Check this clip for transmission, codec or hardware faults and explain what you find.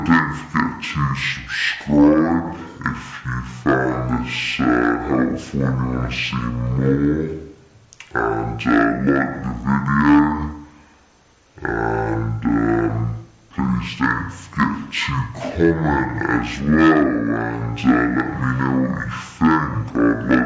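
One fault runs through the whole clip: a wrong sample rate. From start to finish, the audio plays at half speed and an octave low. The samples reach the output at half the rate they were captured, with no conversion between. That fits material recorded at 32 kHz being played back at 16 kHz. Time stretches by a factor of two. Pitch drops by 12 semitones. Everything sounds slow, heavy and deep.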